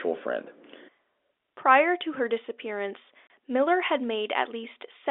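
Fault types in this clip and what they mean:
Packet loss filled with silence: one packet's worth of audio went missing and the receiver played silence in its place, leaving a 30 ms hole at 3.27 s just after "to her disappearance". Its edges are hard, and the gap's length fits a single lost packet on this band-limited telephone line.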